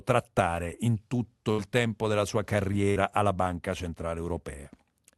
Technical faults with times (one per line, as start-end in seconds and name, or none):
1.51-1.61 burst of packet loss
2.90-2.99 burst of packet loss